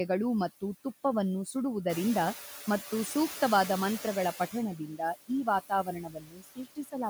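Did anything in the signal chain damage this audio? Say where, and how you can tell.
Yes. Call processing is at fault: noise suppressor artifacts run through the whole clip. The suppressor pulls the background down by about 8 dB frame by frame, so the residual noise dips between phrases and swells under the speech.

The noise suppressor is catching up from 1.89 to 4.37 s. Room noise jumps by about 11 dB near 2 s, and the suppressor's estimate takes roughly 2.5 s to follow. The louder background leaks through at first, then sinks by about 10 dB as the estimate settles.

Speech is cut by the noise suppressor twice, where it mistook parts of the speech for noise. From 4.78 to 5.01 s, about 150 ms of speech drops by up to about 14 dB. From 5.69 to 6.96 s, around a second is pushed down as far as about 20 dB, leaving those stretches swallowed and faint.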